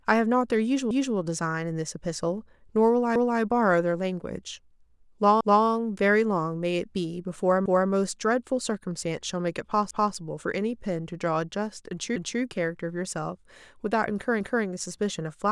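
Speech with overlapping chunks. A 250 ms stretch repeats at 0.91, 3.16, 5.41, 7.66, 9.91, 12.16 and 14.41 s. Each new 2-second chunk restarts before the previous ended, causing regular stutters.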